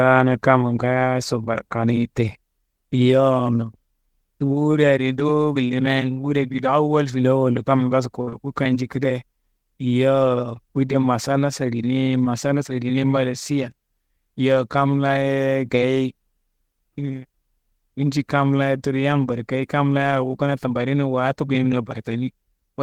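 It's a speech clip, and right after "filawollo kamma ngaaso" there's a burst of packet loss from 8.21 to 8.29 s. A run of packets didn't arrive in time, so the receiver kept the last sound going for about 56 ms while fading it down. That comes across as a held, dying-off stretch instead of real audio. When the stream picks up again, roughly 60 ms of the original has simply been skipped. Straight after it, from 8.29 to 8.34 s, there's a short concealed packet loss. Another small hole, about 20 ms of missing audio, gets patched with around 26 ms of extrapolated sound that's blended back into the real signal. This one is more of a brief smear or wobble, coming right on the heels of the first.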